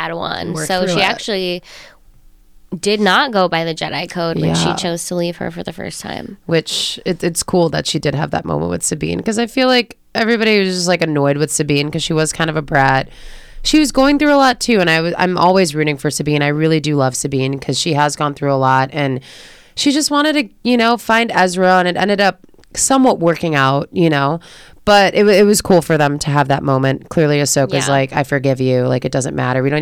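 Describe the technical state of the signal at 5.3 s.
At 5.3 s the speech carries hard clipping, as it does through the whole clip. The signal was driven about 6 dB past what one stage could handle. That stage cut the loudest peaks off flat. Well under one percent of samples were affected, so only the peaks are hit. The flattened tops add harmonics high in the spectrum. You hear them as crackle on the loudest moments of the speech.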